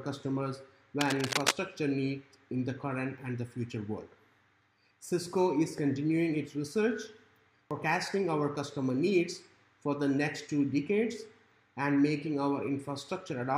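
From 1.01 to 1.54 s there's cable scratch noise, a rustly crackle about as loud as the sound itself, likely a worn lead or connector shifting.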